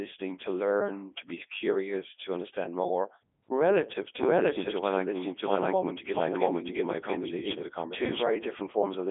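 Codec 2 vocoder damage runs throughout: speech is rebuilt from sine waves using pitch and spectral envelope, sounding robotic and buzzy, fitting its 3.2 kbit/s mode, with nothing above 3.7 kHz.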